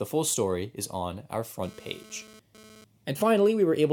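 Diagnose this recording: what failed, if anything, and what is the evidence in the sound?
The failure is in the analogue wiring: a GSM phone buzz enters just after "story is on our", from 1.63 to 2.84 s, as a harsh rasp about 24 dB below the speech. A nearby 2G handset's radio bursts at 217 Hz were rectified by the audio circuitry, and the short-lived interference points to a data transfer rather than a call. A spectrogram shows a dense comb of harmonics spaced 217 Hz apart, and the waveform carries a regular pulse train unrelated to the speech.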